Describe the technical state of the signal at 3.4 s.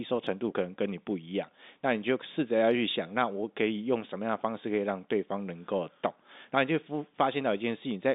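At 3.4 s the signal is intact, with the speech carried cleanly through its G.711 telephone coding and no fault present at that moment.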